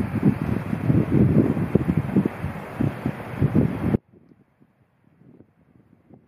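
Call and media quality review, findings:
Audio dropout to a faint residue, 3.96 s to end of clip. Abrupt cut mid-flow, no fade. Gap not silent: a faint leak of the sound persists, roughly 30 dB under normal level, so the path downstream stayed live while the wanted feed was lost. Likely cause: upstream source or input disconnect (capture device or link loss) with the rest of the chain still passing bleed. No recovery before clip ends.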